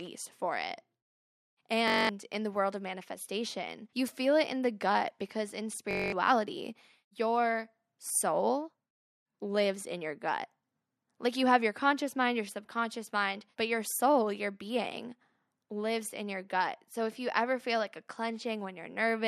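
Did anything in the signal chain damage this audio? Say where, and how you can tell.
Yes. A system hang loop at the driver or buffer stage, 1.88–2.09 s before "in the world of" and 5.91–6.12 s after "the gut because in", repeats a 21.3 ms block, buzzing at 46.9 Hz. This fits a frozen 1024-sample ring buffer. Spectrograms show evenly spaced vertical stripes, and the waveform shows identical copied cycles.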